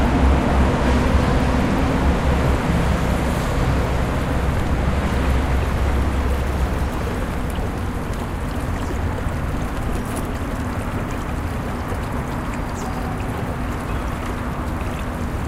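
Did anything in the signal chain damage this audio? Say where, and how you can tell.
No, nothing in the signal chain audibly damaged this recording of everyday sounds at any stage.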